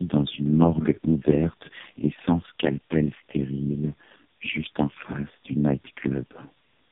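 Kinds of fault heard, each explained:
Tandem speech coding: the speech passed through three low-rate AMR-NB coding stages in a row, each re-encoding the last one's damaged output. The result is rough, muffled and warbly, with nothing above 3.7 kHz. Unlike a single low-bitrate pass, the artefacts compound rather than simply dulling the sound.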